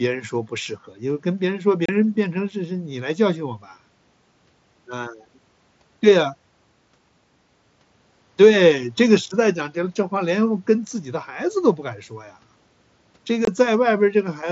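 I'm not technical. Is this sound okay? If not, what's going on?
No, not quite. There are two brief dropouts, at about 1.86 seconds and 13.45 seconds, each lasting a few hundredths of a second. That's unconcealed Bluetooth headset packet loss: a few tiny chunks of speech were lost between the headset and the phone over the wireless mSBC headset link, so they were replaced with silence or an idle pattern, leaving abrupt little gaps.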